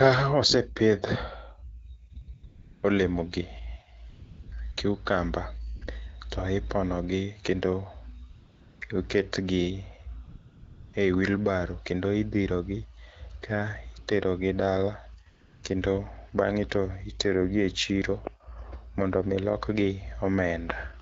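AMR comfort noise replaces the background eleven times between 2.13 and 15.63 s, in gaps of 20 ms to 680 ms. No speech frames were sent, so the receiver synthesised smooth noise. Unlike a gate's dead silence, steady featureless hiss switches in and out.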